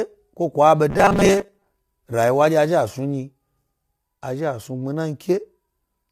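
Throughout the clip the speech sounds rough and grainy, with a hiss sitting between the harmonics of the voice and a top band that comes across as dull or synthetic. This plainly audible damage is likely low-delay AAC compression, the AAC-ELD kind used in video calls. At a low bitrate the bits run out and noise fills the gaps, consistent with a bitrate around 32 kbps. From 0.90 to 1.65 s the voice turns into a rigid, metallic buzz pitched at 200 Hz that still loosely tracks the syllables. This is robotic sound from repeated short buffers: when new audio arrived too seldom, playback likely filled the gaps by looping the last chunk while skipping real material. The 200 Hz buzz fits a chunk about 5 ms long, and roughly half of that stretch seems to be repeats rather than fresh audio.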